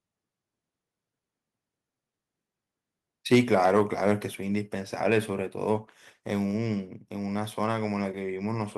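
From 3.32 to 4.12 s the loudest syllables take on a harsh, gritty crackle, with the peaks sounding flattened and buzzy. This is microphone overload: the input level was likely set too high, driving the peaks roughly 5 dB past what the converter can represent. The tops of those waveforms are sliced off, and that squared-off shape adds the distortion, although only a small share of the samples, somewhere around one or two percent, are actually affected.

At 4.35 s, shortly after that distorted stretch, the speech and the background behind it both drop at once, by about 4 dB. This is the microphone volume stepped down. The call software likely reacted to the clipping by cutting the device's input gain in a single move rather than a gradual fade, so the whole signal sits quieter from that point on.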